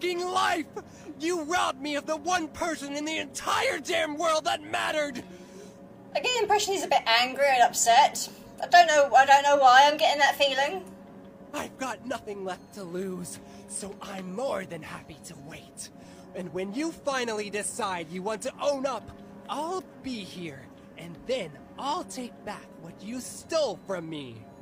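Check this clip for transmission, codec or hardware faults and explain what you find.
No transmission, codec or hardware faults.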